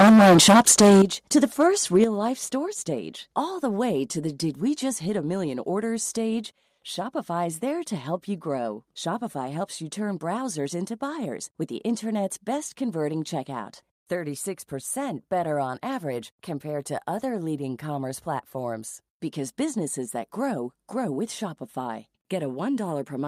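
Speech opens with heavy microphone overload from 0.0 to 1.02 s, about 14 dB over the limit with around two fifths of samples flattened, then brief crackly peaks at 1.37–1.67 s and 1.95–2.04 s, each only about 1–2 dB over. The likely cause is input gain set too high, so the converter cuts off peak tops. On a waveform these appear as squared-off plateaus, and on a spectrogram as smeared vertical bands of high-frequency distortion. The microphone volume then steps down abruptly at 1.02 s by about 12 dB and again at 2.04 s by about 7 dB, each right after distorted peaks, likely from call software automatically lowering the device's input gain. The waveform envelope drops in a sudden stair-step, and the spectrogram darkens evenly across all frequencies at those instants.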